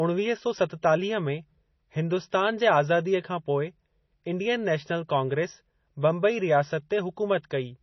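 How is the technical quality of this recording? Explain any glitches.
The recording is heavily degraded throughout. Likely MP3 compression, at a bitrate starved enough to suggest roughly 24 kbps, cuts everything above 6 kHz and flickers weak frequency lines, leaving the speech dull, watery and swirly, with smeared consonants.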